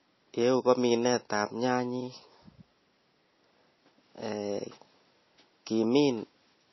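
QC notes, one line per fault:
Throughout: transcoding between lossy codecs. Nothing is heard above 5.8 kHz, so the speech sounds dull and boxed in. Two layers of coding damage are heard together. This fits a low-rate MP3 around 24 kbit/s that was likely re-encoded to AAC-LC near 48 kbit/s. The second codec spends bits on the first codec's artefacts and adds its own. The lower cut-off stays.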